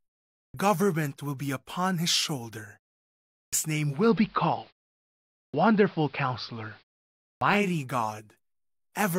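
At 0.38 s the speech begins with a clipped start after a pause: roughly 160 ms of its opening is missing, so it jumps in out of silence without its first sounds. The playback device appears to idle during quiet and needs time to wake, which swallows the leading audio. The same happens at 3.38 s (about 150 ms lost after a 0.67 s pause).

From 3.76 s the receiver performs a digital radio blend to analogue, cross-fading over about 350 ms to the AM broadcast of the same station. The level shifts by about 4 dB, and a hiss appears, sitting roughly 30 dB below the speech.

While on AM, further clipped starts occur at 5.38 s (about 160 ms lost after a 0.74 s pause) and 7.27 s (about 140 ms lost after a 0.52 s pause). The blend back to digital completes at 7.76 s, removing the hiss.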